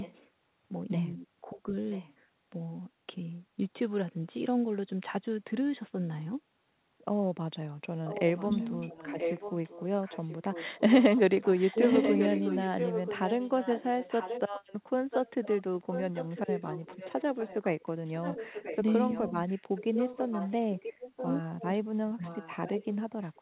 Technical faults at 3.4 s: none

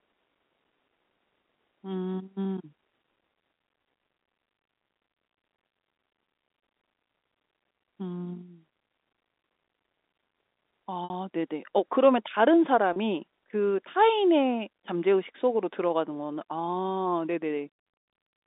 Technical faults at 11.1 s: packet loss with pitch repetition

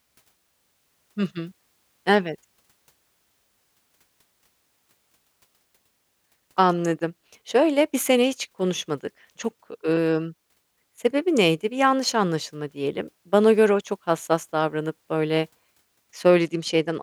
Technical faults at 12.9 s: none

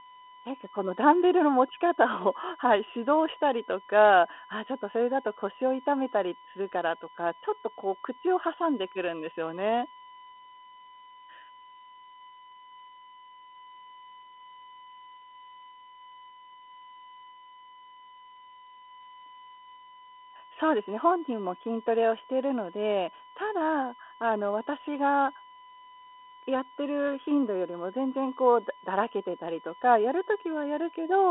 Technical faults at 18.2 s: USB whine

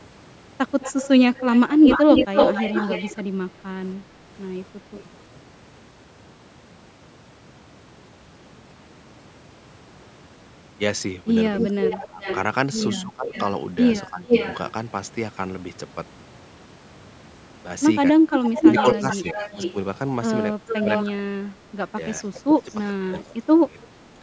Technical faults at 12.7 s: speech suppressed in double talk; echo leak

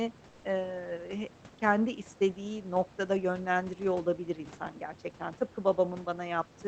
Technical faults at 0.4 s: comfort noise in place of the background

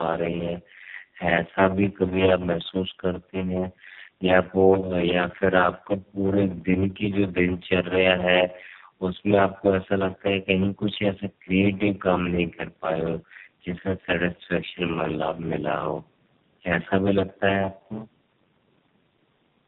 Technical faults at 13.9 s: block size mismatch (padded); tandem speech coding

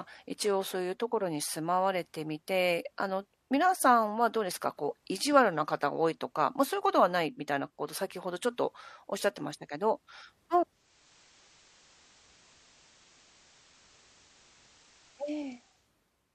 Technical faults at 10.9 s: digital radio blending to analogue

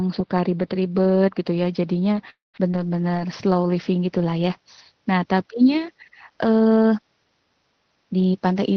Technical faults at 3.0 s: scattered short gaps

